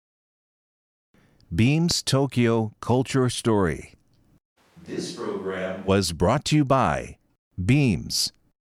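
At 1.91 to 1.95 s a single loud pop cuts through the speech, peaking around 10 dB above it while the speech carries on underneath. Unlike a click or dropout, it is one thump with no gap, likely from a voltage pulse such as a plug or static discharge.

From 4.59 to 5.87 s the sound switches to a distant microphone: it turns roomy and hollow, loses bass, drops about 10 dB, and room noise rises to roughly 30 dB below the speech. Both transitions are abrupt, unlike a gradual gain fade, likely because the close microphone's signal failed briefly.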